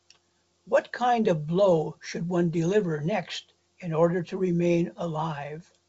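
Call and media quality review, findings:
Nothing stood out on listening to this speech clip, which carries the band-limited wideband character of a G.722 telephone path, with nothing heard above about 7.7 kHz.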